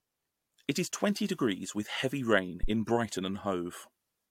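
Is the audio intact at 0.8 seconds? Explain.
Yes, at 0.8 seconds the audio is intact, with no dropout, click, distortion or other fault.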